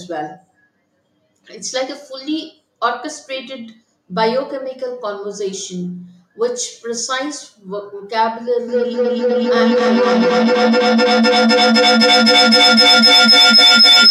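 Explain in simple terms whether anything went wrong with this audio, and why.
Feedback howl begins at 8.68 s and runs to the end: a piercing whistle near 5 kHz that pulses about every third of a second and keeps getting louder, ending up above the speech. Unlike an ordinary echo, which fades away, this sound builds.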